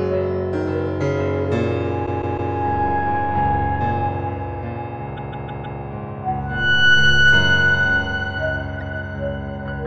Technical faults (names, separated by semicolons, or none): repeated frames